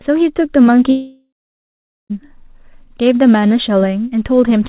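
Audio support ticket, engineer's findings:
Long network dropout, 0.9 to 2.12 s. Sound stops; the receiver extends the last sound as a fading buzz or hiss, then about 0.8 s of near silence. About 1.2 s lost; audio resumes past the gap. Likely packet loss, concealment exhausted. Band limit at 4 kHz fits G.711 mu-law at 64 kbps.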